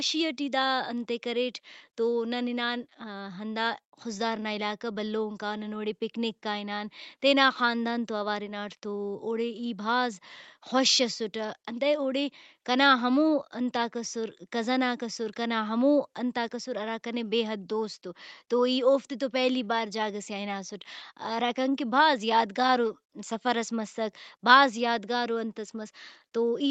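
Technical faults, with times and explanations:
No technical faults can be heard in this speech. Nothing sounds above 8 kHz, which fits the bandwidth of the call path it went through.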